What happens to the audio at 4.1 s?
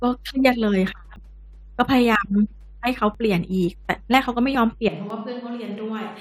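At 4.14 s, two 1-second stream segments carried overlapping time stamps, and the player trimmed the overlap from audio that was never actually duplicated. A few milliseconds of speech vanish and the waveform jumps, producing a brief click or tiny skip, an overlap between stream segments.

Underneath, a ground loop or nearby transformer is coupling the 50 Hz power line into the signal, so mains hum runs as a steady low tone, roughly 25 dB below the speech, through this moment as it does across the whole clip.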